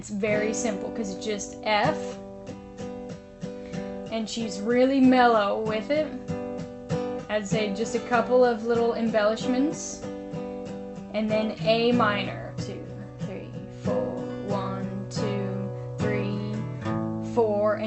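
The signal shows no technical faults, and the call path behaves as expected for Opus over a WebRTC link, with the top end rolling off near 8 kHz.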